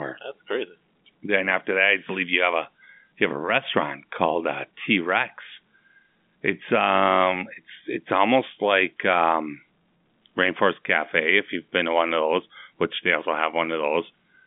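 Nothing stood out as a technical problem on listening to this speech recording, which has the narrow sound of G.711 telephone coding, with nothing heard above about 3.7 kHz.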